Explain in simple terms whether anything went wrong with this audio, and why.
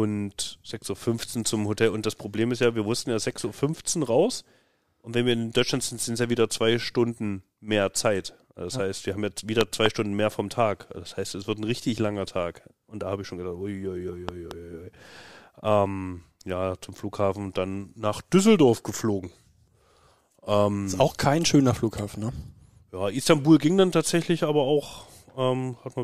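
Two loud pops, each a quick double thump, at 9.61 and 14.29 s, likely an electrical glitch; unlike a dropout, speech continues underneath.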